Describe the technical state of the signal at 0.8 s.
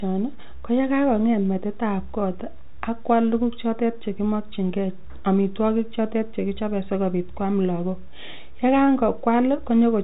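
At 0.8 s the speech is intact, with no fault, and only the narrow G.711 telephone band is audible, with nothing above about 4 kHz.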